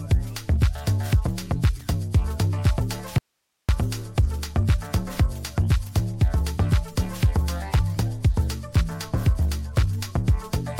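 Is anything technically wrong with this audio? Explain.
Yes. An audio dropout to a faint residue runs from 3.18 to 3.69 s. The sound cuts out abruptly for about half a second, leaving only hiss around 55 dB down, likely because the signal was lost while the downstream path stayed live. The waveform narrows to a thin band, and the spectrogram shows a sharp-edged gap of faint broadband noise.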